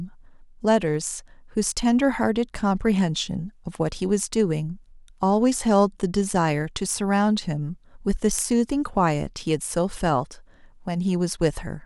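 From 0.11 to 11.85 s, clock slip clicks rattle softly about every 30 ms, likely from mismatched device clocks roughly 700 ppm apart, showing as evenly spaced thin vertical spectrogram lines.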